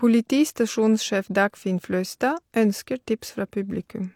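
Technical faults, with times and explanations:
No technical faults heard.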